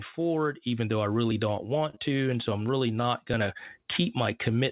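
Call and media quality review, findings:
Short stall from a late packet, 1.90 s: packet missed its slot, jitter buffer ran dry, receiver held last sound about 27 ms until arrival, then resumed in place. Nothing lost; sound briefly held over with slight buzz or dip. Playout delay up 27 ms.

Short stall from a late packet, 3.02 s: same jitter-buffer underrun, about 17 ms of held sound before resume. No audio lost; delay steps up another 17 ms.

Short concealed packet loss, 1.95 to 1.98 s, right after the first stall: about 20 ms of audio never reached the decoder. Receiver concealment extended the preceding sound about 15 ms, then cross-faded back. Brief smear or wobble; a short consonant may drop. Narrowband call path with nothing above 4 kHz, which fits G.711 mu-law at 64 kbps.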